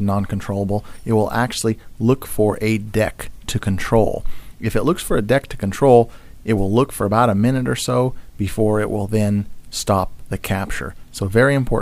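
Nothing is technically wrong with this clip.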